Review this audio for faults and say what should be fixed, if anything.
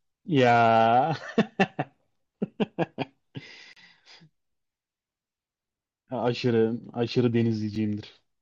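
Two gaps between stream segments cut the speech. The first runs from 3.73 to 3.77 s, about 33 ms of silence. The second, near 7.75 s, lasts about 5 ms. Both have hard edges. They fall near 4 s segment boundaries, where mismatched time stamps leave holes the player fills with silence. No audio is lost. Align segment time stamps so each segment begins exactly where the previous one ends.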